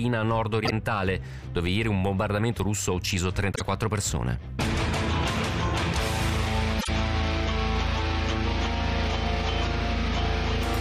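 Brief garbled flutters at 0.65, 3.52 and 6.79 s are frames out of order: pairs of adjacent 26.1 ms frames decoded swapped, with no time lost.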